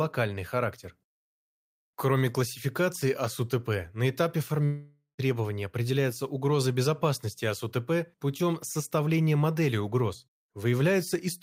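A speech clip with a long network dropout from 4.65 to 5.20 s, after "на этапе": the sound smears into a fading buzz, then about 0.13 s of near-silence before "определяются угрозы безопасности" resumes, likely lost packets. On a spectrogram, smeared bands fade to a blank gap.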